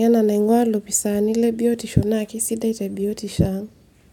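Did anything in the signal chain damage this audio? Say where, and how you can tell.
No, nothing in the chain has left an audible mark on this speech recording. Listening closely, no stage between capture and playback shows any sign of damage.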